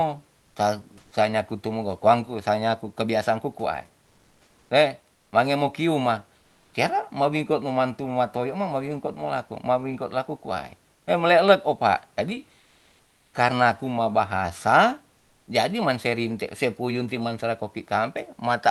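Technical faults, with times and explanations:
0.99–1.11 s, 5.15–5.31 s, 6.39–6.73 s, 12.59–13.33 s and 15.17–15.47 s: comfort noise in place of the background. In these speech pauses, lasting 120 ms to 740 ms, the room noise, about 40 dB below the loudest speech, turns into a smooth, featureless hiss. The level is nearly the same in most gaps but about 4 dB quieter at 5.15 s. This likely comes from Opus discontinuous transmission, where the receiver synthesises noise while the sender is silent. On a spectrogram, grainy texture gives way to uniform, flat shading. On a waveform, the floor looks evenly smooth.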